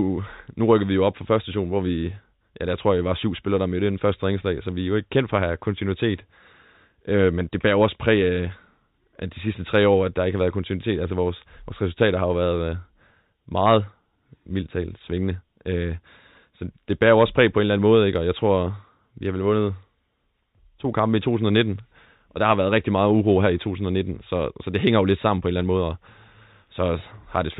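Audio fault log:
No faults heard in this speech recording.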